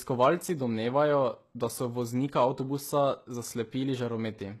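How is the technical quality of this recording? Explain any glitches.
The recording is heavily compressed for its full length, and the damage sits in the upper frequencies. The speech is coded with what is likely HE-AAC compression. Only the lower spectrum is coded properly. The treble is rebuilt by copying lower bands upward and shaping them with a rough envelope, so it sounds bright, but its harmonics don't line up with the real ones below. S sounds come out gritty and lispy, with a metallic edge. The heavy damage points to a very low bitrate, around 16 kbps. Ordinary low-bitrate MP3 or AAC would sound dull and muffled at the top. Here the top stays present up to a sharp ceiling near 12.3 kHz, but it sounds synthetic.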